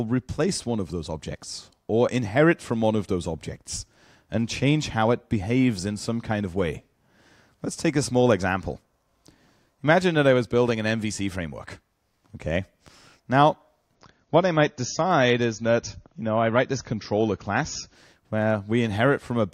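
At 13.95 s the audio drops to an adaptive stream at a lower bitrate. The switch is sudden, with no gap. Nothing above 7 kHz remains, and codec artefacts thicken. The change points to roughly 128 kbit/s MP3 falling to 32 kbit/s. Full quality returns at 17.95 s.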